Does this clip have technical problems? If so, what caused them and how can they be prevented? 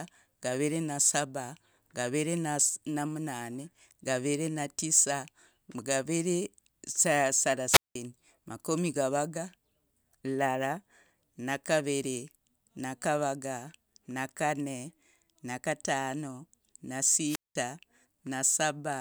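Yes. Two wireless microphone squelch dropouts occur, at 7.70–7.95 s and 17.26–17.55 s. Each is a short rise of hiss, then about 0.19 s and 0.20 s of near silence as the weakened FM link trips the receiver's squelch. Line of sight and a diversity receiver with well-placed antennas prevent this.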